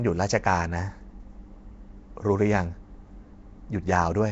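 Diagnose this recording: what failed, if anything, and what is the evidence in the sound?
Codec stage: the speech sounds rough, hissy and underwater throughout, with nothing above 7.8 kHz. That's likely Nellymoser compression starving weak bands and filling them with noise.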